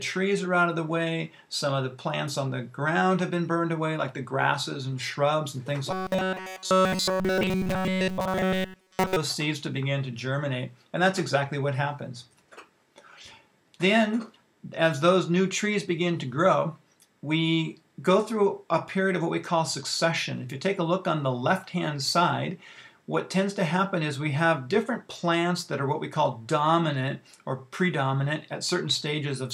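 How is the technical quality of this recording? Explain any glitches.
The recording has one glitch. From 5.91 to 9.16 s there is robotic sound from repeated short buffers: a rigid 188 Hz buzz, likely from a roughly 5.3 ms chunk looping continuously. Unlike a stutter or dropout, there are no gaps.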